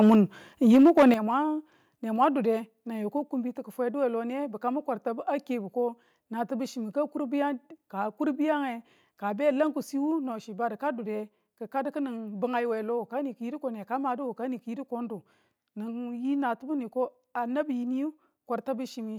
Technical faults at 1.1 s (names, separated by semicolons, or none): microphone overload; microphone volume stepped down